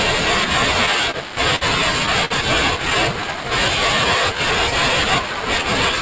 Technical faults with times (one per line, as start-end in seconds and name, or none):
0.00-6.01 channel delay (comb filtering)
1.11-1.17 short stall from a late packet
1.56-1.64 short stall from a late packet
2.25-2.33 short stall from a late packet
3.13-3.49 jitter buffer slow-down